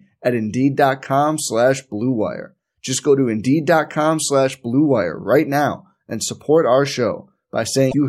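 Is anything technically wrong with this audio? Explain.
Yes. Near the end of this speech clip, from 7.88 to 7.94 s, there is damaged data in a compressed stream. For about 60 ms some of the coded bytes are wrong, so the decoder misreads those frames, loses sync and hunts for the next valid frame header. The result is a short chirp, squawk, click or hole. On a spectrogram it shows as a narrow vertical disturbance, and the waveform shows an abrupt discontinuity.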